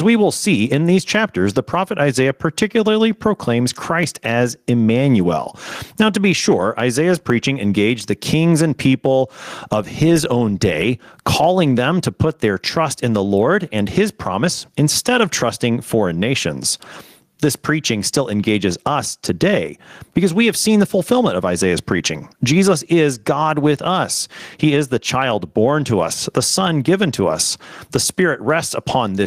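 Input gain likely set far too high, with a fast limiter clamping down on every loud sound, causes gain pumping throughout: the gain swings by roughly 15 dB, squashing levels.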